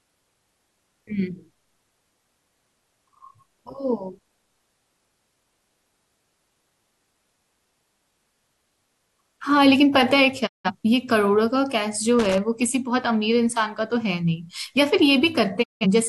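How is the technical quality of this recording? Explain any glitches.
The speech carries three distinct glitches, two brief silences and one burst of crackle.

At 10.46 to 10.70 s and again at 15.62 to 15.86 s, the sound fades out over about 20 ms and drops to silence for roughly 170 ms before returning. Both are digital broadcast dropouts: the receiver lost or rejected corrupted frames, consistent with about four frames each time, and muted until clean data resumed, so that stretch of speech is gone.

From 12.19 to 12.38 s there is a short, irregular scratchy crackle. That is loose connector crackle: a worn or dirty contact rapidly making and breaking as it shifts, chopping the signal into ragged fragments for a fraction of a second.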